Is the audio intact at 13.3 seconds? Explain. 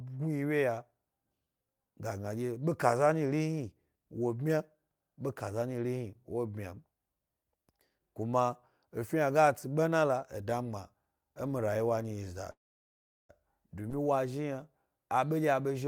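No. A call audio freeze runs from 12.51 to 13.32 s: the last sound briefly carries on and then drops to about 0.73 s of silence, most likely because delayed packets drained the jitter buffer. Audio resumes with nothing lost, arriving about 0.78 s late.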